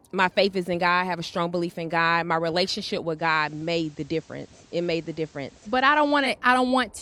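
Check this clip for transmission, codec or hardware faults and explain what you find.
One fault: a digital radio blending to analogue from 3.15 to 6.32 s. The receiver cross-fades over about 100 ms to the FM broadcast, adding faint hiss and a level drop of about 2 dB. A spectrogram shows the noise floor rising between.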